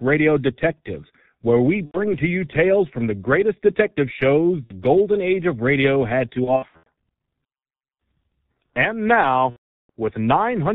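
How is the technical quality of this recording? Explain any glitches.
The technical quality is poor: heavy low-bitrate codec damage runs through the whole speech clip, and four dropouts are patched over by the decoder.

The G.723.1 codec at 6.3 kbit/s codes speech in 30 ms frames and discards everything above 4 kHz, so the voice sounds muffled and hoarse with smeared consonants. On a spectrogram, energy stops flat at 4 kHz and the harmonics look blurred.

VoIP packet loss concealed by the speech codec occurs at 1.85–1.99 s, between "where we" and "to you tales from"; at 4.65–4.73 s, after "the greatest detective shows", before "golden age of radio"; at 6.44–6.88 s, after "age of radio had"; and at 9.50–9.90 s. Gaps of 90, 60, 240 (scattered over 420 ms) and 390 ms fit runs of lost 30 ms frames. The decoder extends its last pitch and filter, producing a buzzy tone or coloured noise that fades, and it mutes from the third lost frame in a row. 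These show as smooth, decaying envelopes on the waveform and as repeated flat harmonic stripes on the spectrogram.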